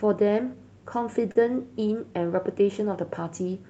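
At 1.31 to 1.37 s the speech hits a short stall from a late packet: the jitter buffer ran dry, so the last sound was held for about 38 ms with a faint buzz or dip. Unlike a lost packet, nothing is skipped, and the speech resumes where it stopped, just 38 ms late, through the 8 kHz call band.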